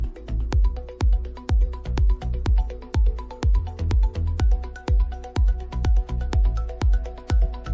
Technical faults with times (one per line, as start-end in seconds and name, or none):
none